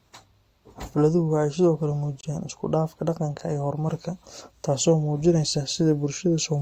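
At 2.21 s, a compressed frame arrived with flipped bits, the decoder rejected it, and the player filled the gap with silence: a corrupt frame muted. The speech drops out abruptly and stays silent until 2.25 s, a hole of about 40 ms, which fits a single discarded frame. Because the missing frame is replaced rather than skipped, the timing holds, and the speech resumes on schedule with no shift afterward.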